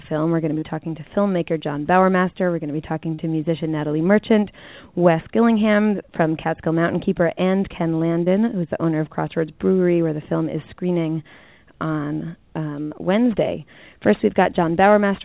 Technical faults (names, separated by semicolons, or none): short concealed packet loss; burst of packet loss